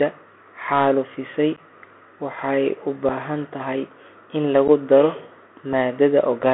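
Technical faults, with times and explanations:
Throughout: Bluetooth CVSD headset codec. The sound is confined to roughly 250 Hz to 3.4 kHz, with a one-bit, 64 kHz delta coder whose step cannot keep up with loud high content. This leaves s sounds scratchy and a granular hiss underneath. A spectrogram shows an empty band above 3.4 kHz and a speckled noise floor.
1.56–1.59 s, 3.09 s, 4.68–4.70 s, 5.73 s: unconcealed Bluetooth headset packet loss. Gaps of 11.2 ms (fitting about three lost packets) and 3.8 ms (about one) were filled with nothing, so the sound drops out with abrupt edges and returns briefly quieter. The waveform shows flat notches, and the spectrogram shows thin vertical dropout columns.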